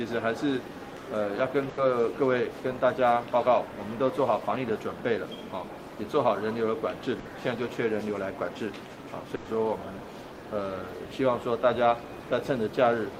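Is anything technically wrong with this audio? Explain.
Yes. There are three bursts of packet loss, at 1.69 to 1.79 s, 7.19 to 7.27 s and 9.35 to 9.47 s. Each time, a run of packets failed to arrive in time, and the receiver covered the hole by extending the last sound it had and letting it fade, for 80, 60 and 100 ms. Each fill is heard as a brief smeared, dying continuation. The audio then jumps ahead, with that much of the original missing.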